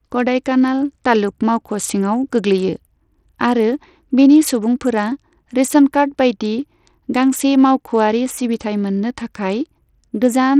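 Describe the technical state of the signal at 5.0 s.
At 5.0 s the speech carries Bluetooth SBC compression damage, present across the whole clip rather than at that moment alone. The treble flickers and drops out, with gritty noise and aliasing on the sound, likely from SBC starving its upper sub-bands at a low rate, around 80 kbps.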